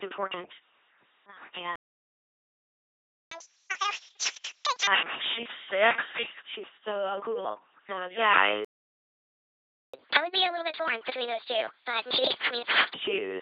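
The speech runs through an LPC-10 vocoder for its full length. At 2.4 kbit/s, this codec discards the original waveform and rebuilds each frame from a short all-pole vocal tract filter excited by either a pulse train or noise. That leaves a heavily damaged, buzzing, mechanical robot voice.

At 1.76 s the audio cuts out in mid-flow and stays silent until 3.31 s, a playback stall of about 1.56 s. The likely cause is that the player ran short of data and its output went dry until the buffer refilled.

From 3.31 s to 4.87 s there is catch-up at higher speed. The player resamples its backlog at 2.0× speed to recover the lost time, so the sound rushes and its pitch jumps by roughly ten semitones, close to an octave. Normal rate resumes just before "I think".

A second playback stall follows at 8.65 s, silencing the output until 9.94 s, a gap of about 1.29 s, again likely with the same starved-buffer mechanism.

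A gentler catch-up at higher speed runs from 9.94 s to 12.94 s. Playback is sped to 1.25×, with pitch raised by around four semitones, before it settles back to the normal rate.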